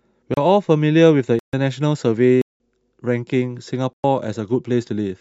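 Four blocks of digital silence hit the speech: 0.34 s (a 30 ms gap), 1.39–1.53 s, 2.42–2.60 s (186 ms, which fits an 8192-sample buffer) and 3.93–4.04 s. Each is a hard cut to silence and back, so you get short holes.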